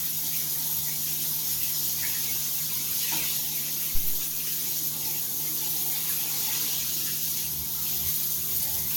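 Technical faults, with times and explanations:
Throughout: generation loss. The sound is swirly, smeared and hollow, attacks are blurred, and nothing reaches above 17 kHz. The likely cause is repeated lossy coding, around ten decode-and-encode passes of AAC-LC near 96 kbit/s, each requantising on a shifted frame grid so noise and spectral holes accumulate.
3.95 to 4.29 s: phantom power thump. A deep low-frequency thump lands and dies away with a decay of about 78 ms. A supply being switched on a live input sends a voltage step through the coupling capacitors, which the input reproduces as this single pulse.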